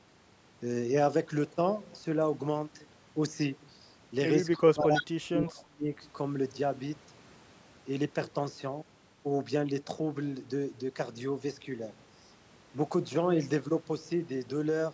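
At 4.57 s a brief echo leak appears: a faint delayed copy of the speech, about 20 dB below the talker, lasting roughly 50 ms. The offset is 316 ms, which points to far-end audio playing on a loudspeaker and likely slipping past an incomplete echo canceller. It returns more strongly from 4.95 to 5.05 s, only about 5 dB under the speech, then again faintly, near 20 dB down, from 5.45 to 5.51 s.

From 4.57 to 5.92 s, the talker's speech is suppressed in double talk. The level pumps down in pieces, dipping by about 25 dB at the deepest, for around a second in total. With both directions active at once, the canceller likely could not tell near-end speech from the returning echo and attenuated everything, so the speech sounds gated and partly dropped out beneath the leaking echo.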